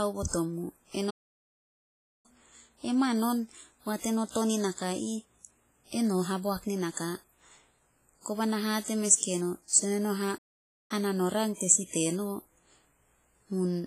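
A speech recording with two technical faults. The audio goes silent twice, from 1.10 to 2.26 s and from 10.37 to 10.91 s. These gaps last about 1.1 s and 0.5 s. Each is likely a playback stall, where the player ran short of data and output nothing until it caught up. Throughout, the artefacts of a very low-bitrate encoding remain, though the file is MP3 at a high bitrate. This is likely low-bitrate audio saved at a high bitrate, which fits an earlier WMA encoding near 24 kbit/s. The later high-rate pass cannot restore what the first one removed.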